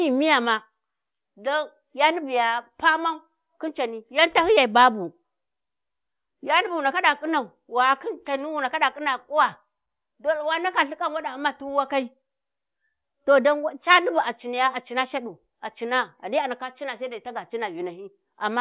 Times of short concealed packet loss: none

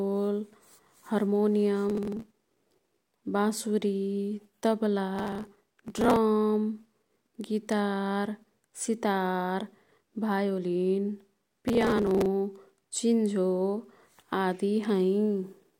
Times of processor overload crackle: 1.89-2.93, 5.16-6.16, 11.68-12.26

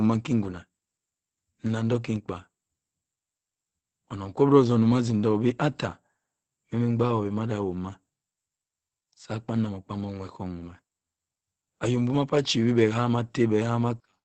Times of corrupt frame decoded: none

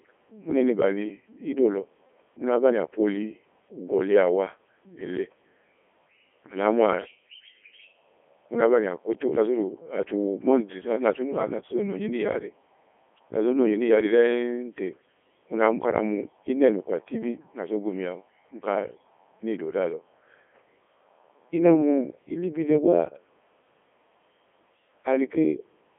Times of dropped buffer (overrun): none

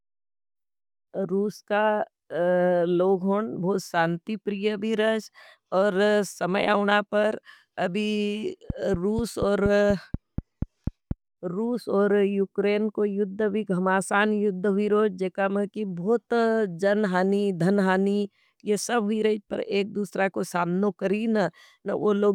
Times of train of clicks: 8.70-11.12

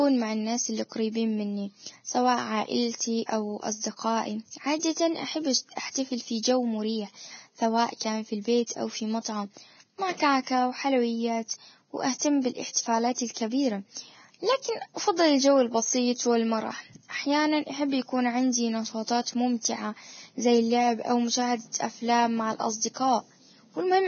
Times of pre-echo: 2.95-3.00, 8.66-8.70, 12.18-12.21, 12.71-12.76

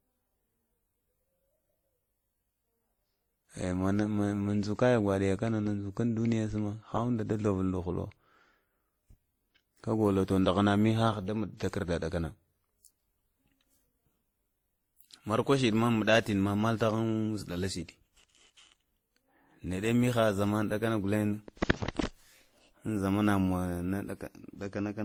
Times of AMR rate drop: none

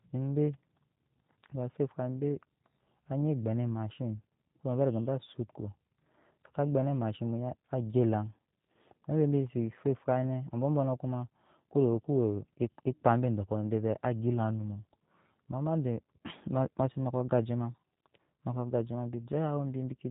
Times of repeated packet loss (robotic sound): none

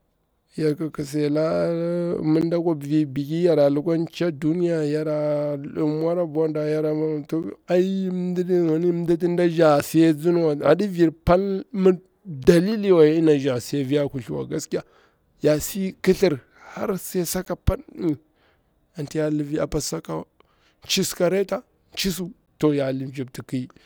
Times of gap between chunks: 2.41, 7.43, 12.44, 17.45, 22.46

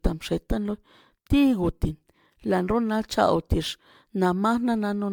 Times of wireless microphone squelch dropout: none

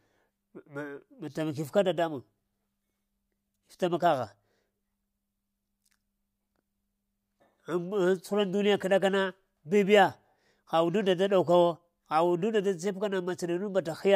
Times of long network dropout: none

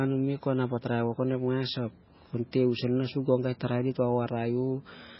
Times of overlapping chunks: none

